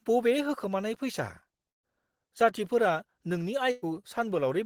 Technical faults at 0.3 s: none

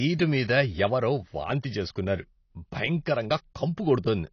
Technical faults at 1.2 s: AAC compression

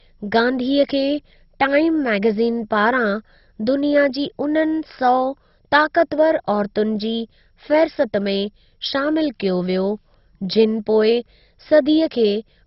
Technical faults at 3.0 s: MP2 compression

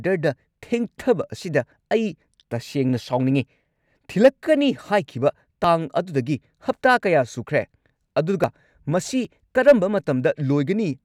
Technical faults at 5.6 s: dropped buffer (overrun)

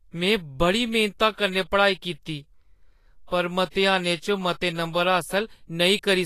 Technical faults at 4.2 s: Vorbis compression

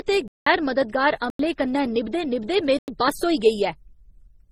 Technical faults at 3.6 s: transcoding between lossy codecs

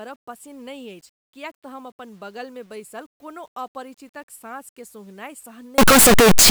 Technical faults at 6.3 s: signed and unsigned mixed up

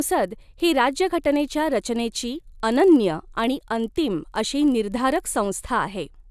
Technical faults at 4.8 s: resampler restarted on every block

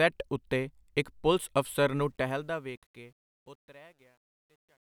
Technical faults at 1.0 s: none

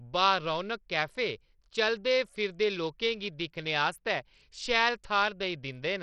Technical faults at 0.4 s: Bluetooth SBC compression

